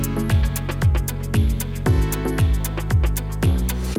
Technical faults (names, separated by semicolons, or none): none